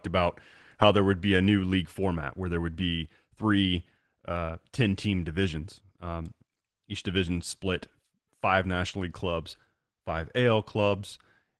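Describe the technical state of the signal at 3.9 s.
At 3.9 s the speech comes through intact, with no dropout, glitch or distortion, only the ordinary character of the call path it travelled through.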